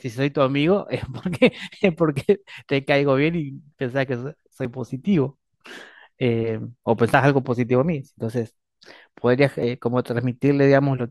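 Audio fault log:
2.16, 4.65, 7.14, 9.63 s: audio missing between chunks, a tiny gapless skip every 2.5 s, likely lost at chunk handovers; unlike dropouts, no silence is heard.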